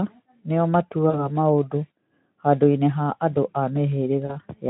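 Speech with two brief buzzy, smeared patches at 1.10 to 1.29 s and 4.25 to 4.36 s, where the sound stretches into a fading tone and stays weak after it returns. This is VoIP packet loss concealed by the speech codec. About 40 ms of audio went missing each time, which fits two 20 ms frames, and the decoder filled the gap from its last pitch and filter before recovering. The lightly coded Speex sound around it points to a rate near 15 kbps.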